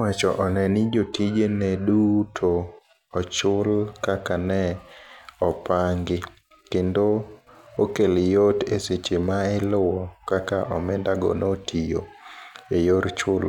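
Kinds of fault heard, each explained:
No technical faults turn up anywhere in this speech recording, so there's nothing to list.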